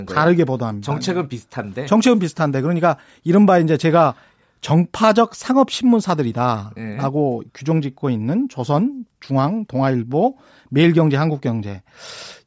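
No technical faults are audible anywhere in the recording.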